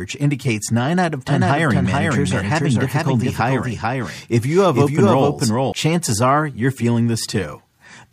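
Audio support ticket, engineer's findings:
Likely a second, slower capture path mixed back in. Doubled audio track from 1.28 to 5.72 s, after "out of" and ending before "chances are you're feeling." Dry copy roughly 0.4 s behind, about 5 dB down, with abrupt entry and exit.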